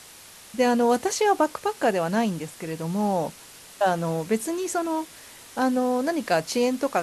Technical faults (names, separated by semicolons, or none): low bit depth with dither